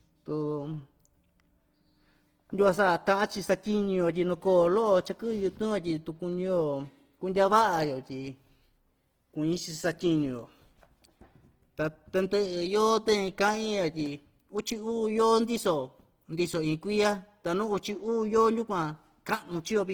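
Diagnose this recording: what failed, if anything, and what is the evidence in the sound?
The codec stage is where this went wrong, most likely Opus compression across the whole speech clip. Content reaches about 20.2 kHz, yet everything sounds grainy and rough rather than swirly. That points to CELT mode starved of bits and filling bands with noise, which fits roughly 16 kbps.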